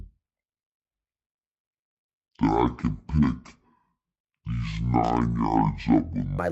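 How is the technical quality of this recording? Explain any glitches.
The quality is poor. Stereo is read as mono from 0.0 to 6.39 s, ending just before "legs instead of my." Interleaved left and right samples play as one channel, so speech runs at half speed, an octave low.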